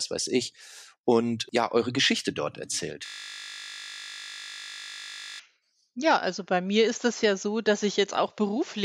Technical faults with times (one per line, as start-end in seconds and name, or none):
3.06-5.40 system hang loop